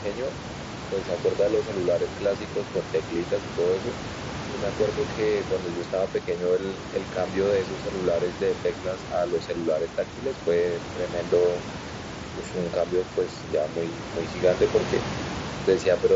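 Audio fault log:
No faults logged: the speech runs over a Bluetooth mSBC headset link at about 61 kbps, which limits it to 8 kHz, with room noise about 12 dB beneath it.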